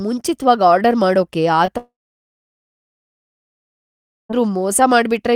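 At 1.65 to 1.70 s, just after "ಮುಂಚಿತ್ವಾಗ್ ಆರ್ಡರ್ ಮಾಡೋಕೆ", short concealed packet loss: about 20 ms of data arrived too late, so the decoder extended the preceding sound, leaving a brief smear. From 1.78 to 4.31 s, a likely long network dropout: about 2.5 s of audio is lost, with a fading continuation giving way to roughly 2.4 s of silence.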